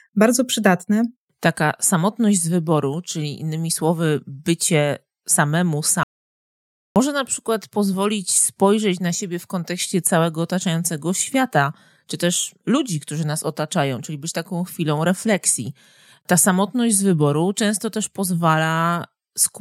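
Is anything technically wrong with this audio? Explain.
Yes. An audio dropout to silence runs from 6.03 to 6.96 s, after "innymi słowy bycie samemu". The input was likely lost while zeros kept recording, so 0.93 s falls into dead silence, without room tone, until "na przykład pozwolić spojrzeć".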